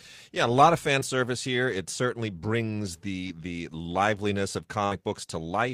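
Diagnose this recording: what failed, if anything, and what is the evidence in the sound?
Network packets carrying this speech call arrived too late for the decoder twice, a short concealed packet loss each time, at 0.99 to 1.03 s and 3.27 to 3.31 s. Roughly 20 ms went missing in each, and the receiver covered the hole by extending the preceding sound, from its pitch where voiced or as shaped noise otherwise, before crossfading back into real audio. Each shows up as a brief smear or wobble in the speech.

A longer burst of packet loss follows at 4.85 to 4.93 s, where about 60 ms failed to arrive in time. The decoder kept synthesising the last sound across the whole gap, letting it fade as the gap continued, so a held buzz or decaying hiss replaces the real signal. When genuine packets resume, the speech picks up later in time, and the roughly 60 ms in between is simply gone from the recording.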